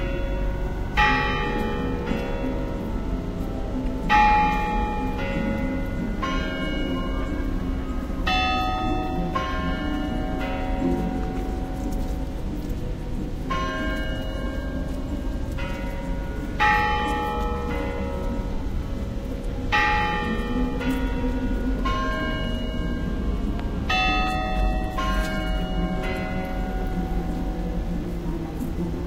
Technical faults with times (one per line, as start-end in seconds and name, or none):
23.59-23.62 loud pop